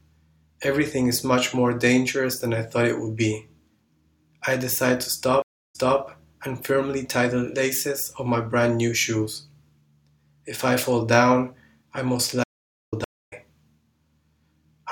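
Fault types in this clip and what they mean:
Stream reconnect: At 5.42 s the sound stops for about 306 ms, then picks up again 261 ms earlier than where it broke off, so a short stretch is heard twice. At 13.04 s a 246 ms silence is followed by a jump forward of roughly a fifth of a second, so some audio is skipped. Each time the connection failed, the player reconnected, and a fresh decoder began partway into the stream.
Audio dropout to silence: From 12.44 to 12.93 s the audio cuts off abruptly into silence, with no room tone or background underneath, and resumes mid-flow after 487 ms, so that portion is simply missing. The likely cause is that the input signal was lost, through a disconnected source or a failed link, while the recording kept writing silence until the signal returned.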